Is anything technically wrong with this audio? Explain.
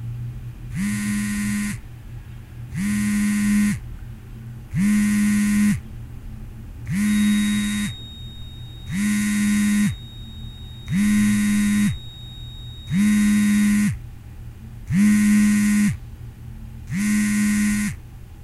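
Yes, there's a feedback whistle from 6.98 to 13.79 s: a thin, steady 3.8 kHz tone about 20 dB under the sound, likely a speaker-to-mic loop hovering at feedback.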